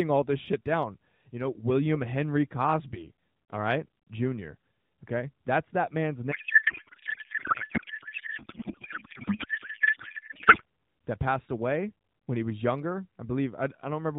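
From 6.32 to 10.63 s, between "that man's" and "that passed away when", a codec payload misread replaces the speech with garbled warble barely following it. Unlike packet loss, sound continues throughout, which suggests octet-aligned AMR read as bandwidth-efficient. Around it, the AMR narrowband path's 4 kHz ceiling and light buzz fit 12.2 kbps.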